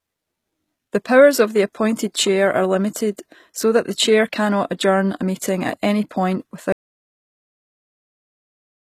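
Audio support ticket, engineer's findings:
Whole clip: HE-AAC compression, plainly audible. Treble sounds bright but synthetic. S sounds gritty and lispy, with a metallic sheen above the crossover. Likely a low-rate HE-AAC encode; the damage fits roughly 20 kbps. Spectral band replication rebuilds the top octaves from copied lower bands, so those harmonics never line up with the real ones.

6.72 s to end: audio dropout to silence. Signal cuts out mid-flow and does not return. The gap is silent with no room tone underneath. Likely input loss upstream of the encoder, such as a dropped device, failed link or stray mute. The recorder kept writing silence, so any speech after 6.72 s is unrecoverable.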